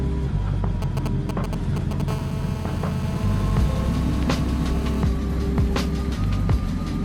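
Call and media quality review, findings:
GSM signalling bursts, 0.82 to 2.02 s: nearby 2G handset paging or signalling, bursts rectified in analogue input stage. Galloping clusters of ticks and short 217 Hz buzzes, nearly as loud as the audio.

GSM phone buzz, 2.08 to 5.03 s: nearby 2G handset in an active call, 217 Hz TDMA bursts rectified continuously. Steady, harsh, harmonic-rich 217 Hz rasp, about 15 dB below the signal.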